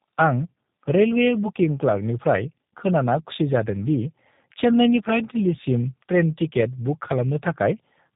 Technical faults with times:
0.00-8.16 tandem speech coding

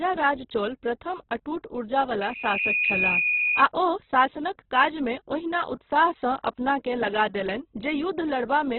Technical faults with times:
0.00-8.78 Opus compression
2.20-3.64 loudspeaker feedback squeal

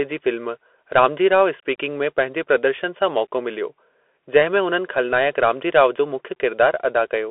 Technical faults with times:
0.00-7.31 Bluetooth CVSD headset codec

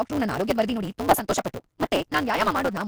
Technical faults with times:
0.00-2.88 Vorbis compression
0.00-2.88 block size mismatch (truncated)
0.77 audio missing between chunks
1.83 audio missing between chunks

